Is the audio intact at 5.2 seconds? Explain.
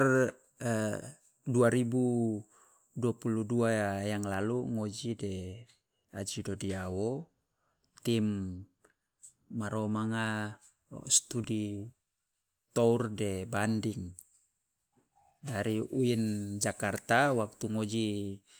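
Yes, the speech runs through 5.2 seconds without any audible dropout, click, distortion or other break.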